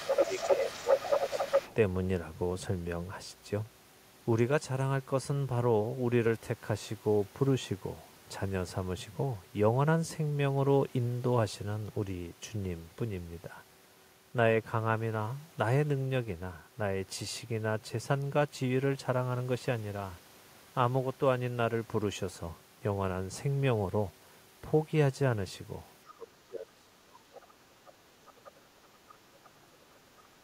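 From the very start to 1.74 s a second voice runs alongside the talker at roughly the same loudness. This is the other side's voice leaking through, likely because the far end's loudspeaker output reached the microphone and the echo canceller left it largely intact. Between 0.17 and 1.69 s the talker's own voice sinks by around 10 dB as the two overlap. That is speech suppressed in double talk: the canceller likely could not separate near talker from echo and turned both down.

Near the end the same pair returns more severely. Brief, faint scraps of the far voice, some 25 to 30 dB below the talker, surface at 26.06 to 26.13 s, 27.34 to 27.38 s, 28.28 to 28.5 s and 29.09 to 29.15 s. These are likely echo residue slipping past the canceller. Meanwhile the talker is pushed down hard, by roughly 30 dB from 26.09 to 28.72 s and by about 35 dB from 29.19 s to the end at 30.43 s, so the voice nearly vanishes in places. 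This is likely the suppressor again clamping down during double talk.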